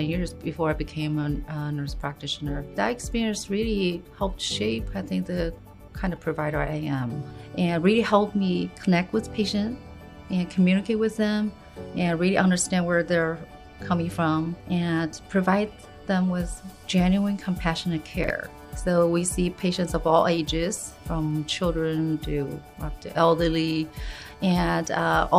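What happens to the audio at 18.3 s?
Between 18.24 and 18.3 s there is a brief case of chunks out of order. A 20 ms chunk arrived two chunks late, so it plays after the two that should follow it. Nothing is missing, but the sequence is scrambled, producing a short jumbled stutter. On the waveform, three abrupt jumps mark the hard joins. On a spectrogram, each join shows as a thin vertical broadband line.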